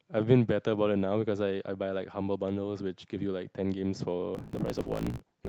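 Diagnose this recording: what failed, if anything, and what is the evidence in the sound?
The driver or buffer stage has a block size mismatch (truncated) from 4.33 s to 5.49 s. Each block, consistent with 1024-sample writes, loses its tail because the next stage reads less. The speech gains a 54.4 Hz buzz and runs 1.16 times fast with its timbre kept.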